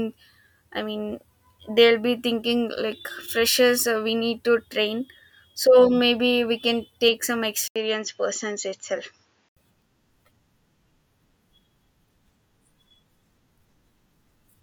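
A brief gap of about 80 ms at 7.68 s opens a stretch of speech that turns duller and narrower, with nothing above 7.2 kHz, a faint new noise floor far below the voice and no real change in loudness. The fuller sound returns at 9.57 s. This is likely an input switched to a poorer device partway through the recording.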